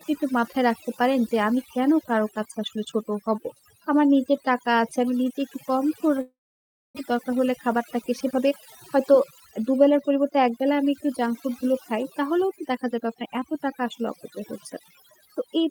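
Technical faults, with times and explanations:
Throughout: overdone noise removal. Quiet speech detail is stripped away with the background. The background drops and breaks up into twinkling specks.
6.21 to 6.99 s: long network dropout, likely. The last sound is stretched into a fading buzz or hiss, then silence. About 0.4 s of speech never returns.
7.11 to 8.52 s and 8.96 to 10.72 s: jitter buffer speed-up. Speech plays about 11% then 9% faster at unchanged pitch, trimming roughly 150 ms each time to cut the built-up delay.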